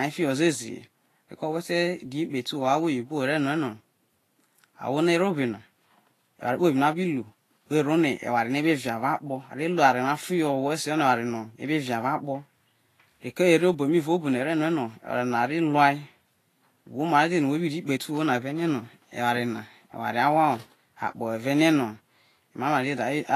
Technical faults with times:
0.00-23.35 Vorbis compression

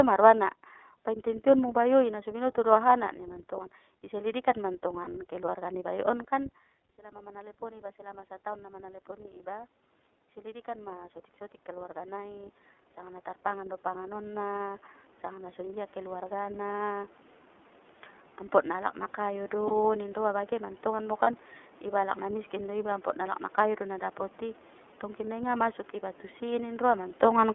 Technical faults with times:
0.00-27.55 iLBC codec
5.04-5.08 lost iLBC frames
10.34-17.07 automatic gain rising
19.67-19.71 lost iLBC frames
21.23-21.28 lost iLBC frames

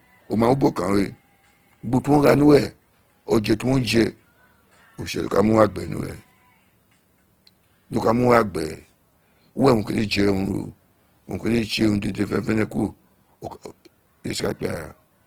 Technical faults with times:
0.00-15.27 Opus compression

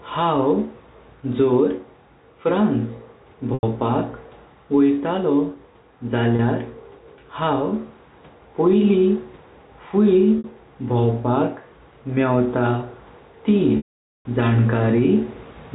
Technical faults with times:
0.00-15.75 gain pumping
3.54-3.63 packet loss with pitch repetition
6.36-6.39 packet loss with pitch repetition
10.38-10.44 packet loss with pitch repetition
13.77-14.25 packet loss with pitch repetition

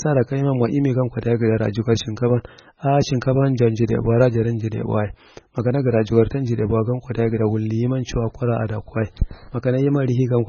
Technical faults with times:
0.00-10.49 MP3 compression

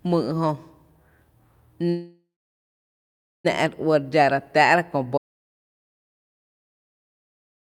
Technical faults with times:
1.89-3.46 call audio freeze
5.18-7.61 audio dropout to silence

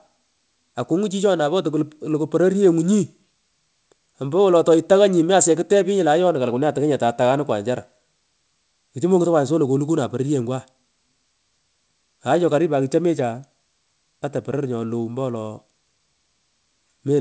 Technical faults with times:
none

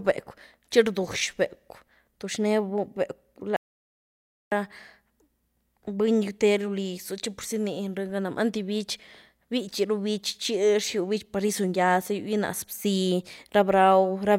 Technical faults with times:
3.56-4.52 audio dropout to silence

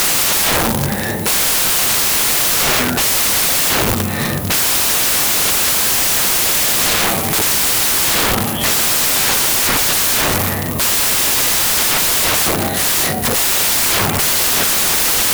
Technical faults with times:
0.00-15.33 samples built from the wrong bytes

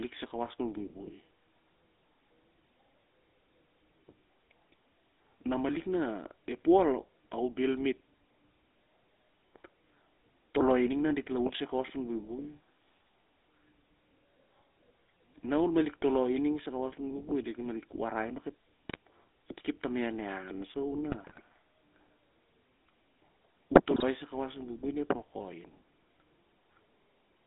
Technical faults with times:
0.00-27.46 GSM full-rate codec
18.89-18.96 GSM bit errors
21.12-21.40 GSM bit errors
23.94-24.03 GSM bit errors

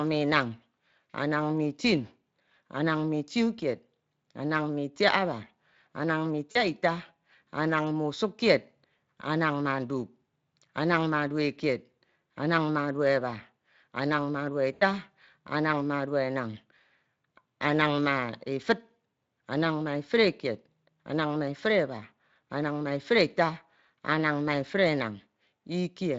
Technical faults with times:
6.51-6.58 VoIP packet loss concealed by the speech codec
14.73-14.83 VoIP packet loss concealed by the speech codec

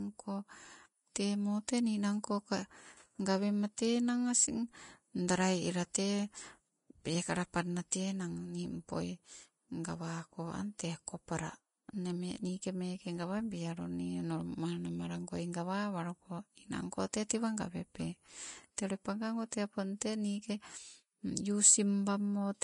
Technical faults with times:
0.00-22.63 Vorbis compression
7.91 pre-echo
17.29 pre-echo

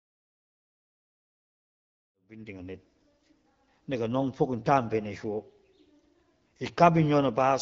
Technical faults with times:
none

